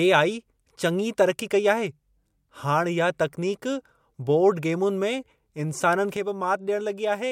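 At 6.17 s a sudden gain jump drops the speech and background noise together by about 6 dB until the end. A likely cause is an unramped gain change.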